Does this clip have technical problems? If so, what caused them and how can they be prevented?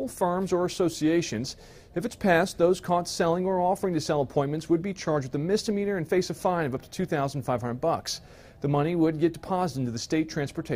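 No, nothing stood out as a technical problem on listening, so there is nothing here that needs preventing.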